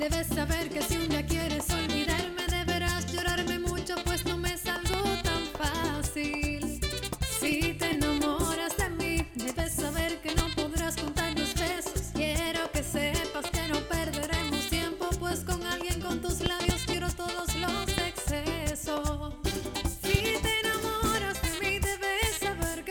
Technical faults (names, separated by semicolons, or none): loud pop